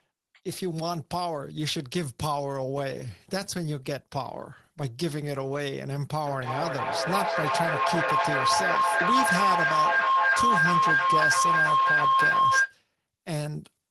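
From 6.26 s to 12.81 s the speech is joined by a rising tone near 1 kHz that pulses about every 300 ms and peaks at about 7 dB above the talker. That is feedback howl: two devices in the same room share the call, and sound leaving one loudspeaker re-enters the other microphone with net gain on each pass. The repeats grow, narrow to the frequency the loop favours, and sustain until the loop is broken, here at 12.81 s.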